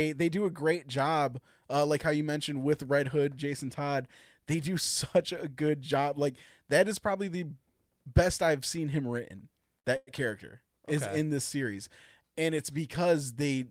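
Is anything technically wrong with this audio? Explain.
Yes, there are two brief interruptions in this speech, close together just after "I've seen him written".

Short stall from a late packet, 9.79 to 9.87 s: a packet arrived late and the jitter buffer ran dry, so the receiver stretched the last sound for about 51 ms, then resumed where it stopped. Nothing is lost, but the sound drags with a faint buzz, and everything after plays 51 ms later.

Call audio freeze, 9.96 to 10.10 s, just before "character okay is in": the last sound is continued for about 105 ms as a fading buzz, with about 10 ms of silence at the end, before speech resumes intact. The likely cause is packets held up in transit, emptying the jitter buffer and adding a further 105 ms of delay.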